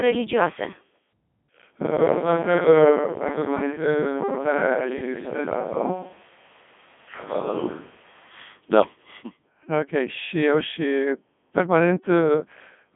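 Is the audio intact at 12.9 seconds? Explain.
No. At 12.9 seconds the speech is robotic and buzzy, with nothing above about 3.7 kHz. This is Codec 2 vocoder damage, present throughout the clip and consistent with its 3.2 kbit/s mode. The codec discards the waveform, transmits only pitch, voicing, energy and spectral envelope, then the decoder rebuilds the voice from sine waves.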